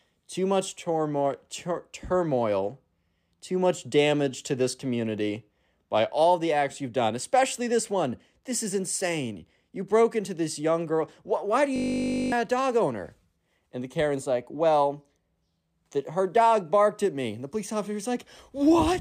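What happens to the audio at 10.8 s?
Nothing goes wrong at 10.8 s; the speech carries on intact through that moment, with no dropout, click or distortion to be heard.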